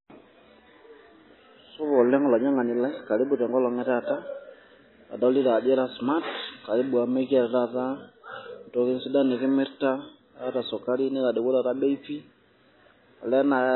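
Throughout, the speech sounds watery and swirly, with nothing above 4 kHz. Unlike a plain low-pass filter, weak detail flickers between frames, likely heavy MP3 compression at a very low bitrate.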